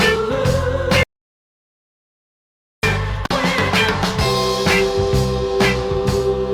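At 1.03 s the sound cuts out mid-flow and stays dead until 2.83 s, about 1.8 s of pure silence with no room tone underneath. That's an audio dropout to silence: the input went away, likely through a disconnected device, a failed link or a stray mute, while the recorder carried on writing digital nothing. When the sound returns it comes straight back in mid-flow, and whatever happened during that stretch is simply gone.

Then at 3.26 s there's a much shorter hole, a gap at a join of encoded pieces lasting about 45 ms, up to 3.31 s. The sound was encoded in separate chunks and stitched together without trimming, so the encoder's start-up delay and the padding on the previous chunk's last frame both stayed in. Continuous sound briefly drops out, with the codec softening the edges, and then carries on exactly where it left off.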